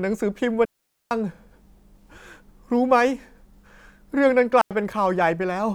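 At 0.65 s the speech drops into a clean hole of near silence lasting about 0.46 s, until 1.11 s. This is a digital wireless dropout. The link lost too much data, so the receiver muted. It recurs briefly at 4.61 s for about 94 ms. Neither gap has a noise burst around it.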